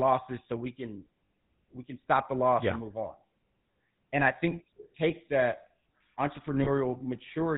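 GSM full-rate codec damage runs through the whole clip of speech and is plainly audible. The coder models the vocal tract as a filter and drives it with a sparse, regularly spaced pulse train built from every third excitation sample, so the voice comes out buzzy and gravelly. Nothing passes above 4 kHz, which dulls the consonants. The character fits the 13 kbps GSM full-rate coder.

Lost GSM frames occur at 1.27 to 1.30 s, right after "so we can" and before "we can stop the", and again at 6.64 to 6.69 s. In both places the decoder stands in for missing frames by repeating the last good frame's settings, so the sound briefly freezes into a rough, metallic ring. The first gap is 40 ms, which fits two frames, and the second is 20 ms, which fits one.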